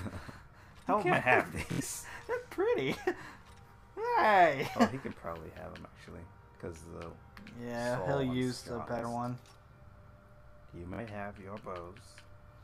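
Three spots of Bluetooth stutter break up this audio: at 1.72 to 1.81 s, 8.99 to 9.03 s, and 10.94 to 10.99 s. Each time, data arrives late or not at all, so the receiver keeps replaying its last slice of roughly 23 ms. The first gap loses about 70 ms and sounds like a short buzz, the second is a single blip, and the third a quick double. After each one the sound jumps ahead as if it had kept playing.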